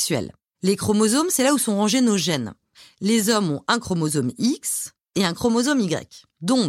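Speech recording; no technical faults can be heard anywhere.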